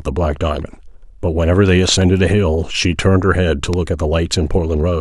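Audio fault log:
1.89–2.04 s and 3.73–3.76 s, loud pop: a double pop a few dB above the speech, then a single sharper pop about 10 dB above it, likely from a voltage step. The speech carries on underneath, which rules out a dropout.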